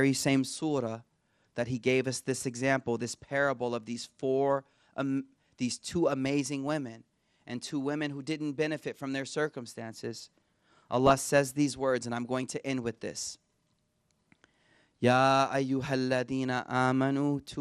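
From start to finish the speech sounds dull and plainly gurgling, with a granular roughness. This is plainly audible MP2 compression, likely from a Layer II encoder at a rate near 80 kbps. Too few bits leave upper sub-bands switched off and the remaining ones coarsely quantised. Unlike the brief bursts that follow, this texture is constant.

From 11.07 to 11.20 s, just before "says these words and", and again from 13.16 to 13.32 s, right after "going to end with", short bouts of DAB burbling break through as short blips of noise. The spans fit roughly ten and thirteen damaged frames. Bit errors on the order of a tenth to a fifth of a percent slipped past error correction and corrupted samples, putting short blips of noise into single sub-bands. These are sudden, localised bursts, not the steady dullness of the coding.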